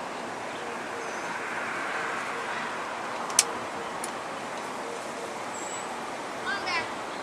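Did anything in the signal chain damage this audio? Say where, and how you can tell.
No, I hear nothing that any stage of the signal chain has added or damaged, so there is nothing to locate.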